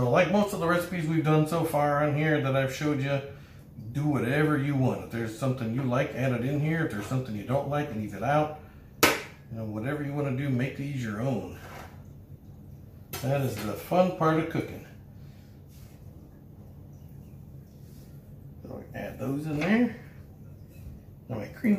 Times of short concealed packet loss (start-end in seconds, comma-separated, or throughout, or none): none